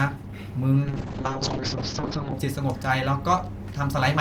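Speech that turns rough, watery and muffled from 0.83 s to 2.39 s, with the top end dulled as the audible band narrows from about 20 kHz to 8 kHz, then clears again. This is a call bitrate drop. The call's bandwidth estimate fell, so the Opus encoder coded more coarsely and cut off the highs. The sound points to a fall from around 32 kbps to about 7 kbps, held for roughly 1.5 s before recovering.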